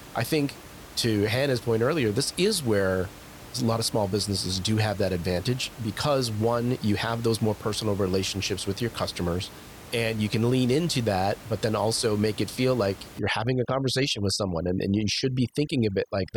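From 13.19 s to the end at 16.36 s, right after "make it feel like", the background collapses to near silence dotted with twinkling specks. This is overdone noise removal: a suppressor set too aggressively cuts individual frequency bands that sit near its noise estimate, including the quieter parts of the speech. The room noise, about 19 dB below the speech, is what it was trying to suppress.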